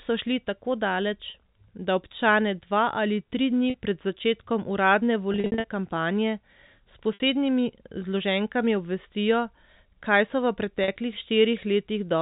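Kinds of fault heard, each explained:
Packet loss with pitch repetition: missing audio is concealed by looping the last pitch period and fading it over roughly 50 ms. Gaps of about 40 ms at 1.3 s (after "so šli tako daleč"), 3.7 s and 10.84 s (after "kaj so v"), and 60 ms at 7.14 s, sound like brief buzzy holds. From 5.32 s, after "dni pred začetkom uradne", about 220 ms drops out in runs scattered over 320 ms, producing a stuttering, repeatedly held stretch.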